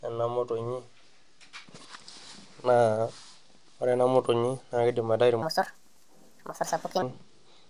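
Speech clip where, from 5.42 to 7.02 s, a wrong sample rate makes the voice run about 1.45 times fast and roughly 6.5 semitones high, consistent with 22 kHz material played at 32 kHz. Unlike a pitch shift or time-stretch, tempo and pitch rise together.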